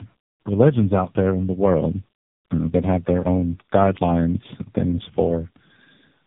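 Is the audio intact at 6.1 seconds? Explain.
No. Tandem speech coding, with two low-rate speech coders in a row, persists through 6.1 s, leaving it rough, warbly and muffled with nothing above 3.7 kHz.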